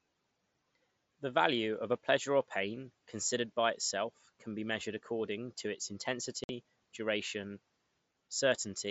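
A speech clip with a single dropout at about 6.44 to 6.49 s, right after "measured according to its": unconcealed Bluetooth headset packet loss, roughly a 50 ms hole with hard edges, which fits about seven lost frames on the headset link, heard through the mSBC codec's light graininess.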